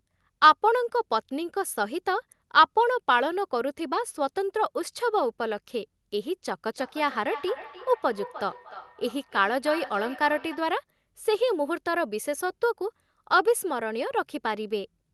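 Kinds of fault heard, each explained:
Feedback echo between two devices: a second device replays the call into another microphone, so sound returns as distinct repeats roughly every 300 ms, not a smooth reverberant tail.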